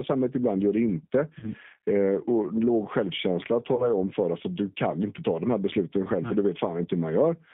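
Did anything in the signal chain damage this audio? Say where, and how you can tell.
Yes. At the codec stage, the whole clip runs through G.729A at 8 kbit/s, which models speech as a vocal-tract filter plus sparse pulses. The result is a rough, synthetic voice confined to roughly 150 Hz to 3.5 kHz.

At the network stage, VoIP packet loss was concealed by the speech codec from 1.39 to 1.49 s (about 30 ms lost) and from 3.76 to 3.90 s (about 20 ms lost). Each time, the decoder stretches the last pitch and filter into a fading buzzy tone or coloured noise that stays weak after packets resume.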